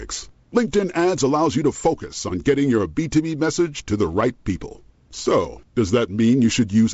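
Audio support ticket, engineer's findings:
No faults found. Wideband telephone coding behaving normally.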